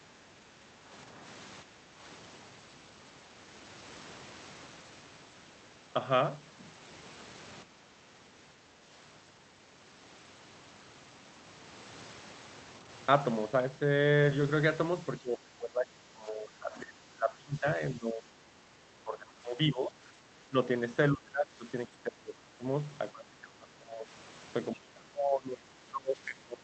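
Speech suppressed in double talk, likely from an echo canceller fighting far-end sound. The speech dips at 0.0–1.17, 1.62–2.04, 7.63–8.01, 15.2–20.02, 20.49–20.55, 21.12–22.65, 23.12–24.09 and 24.72 s to the end. Early dips are smaller, about 5 to 10 dB. Later ones reach about 15 to 25 dB, so the speech fades.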